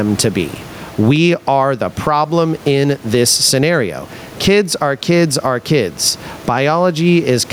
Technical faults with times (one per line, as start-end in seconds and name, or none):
0.00-7.52 gain pumping